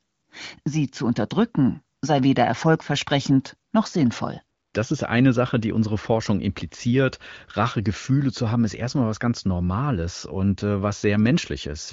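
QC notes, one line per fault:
No fault found in this speech clip; nothing to add to the QC notes.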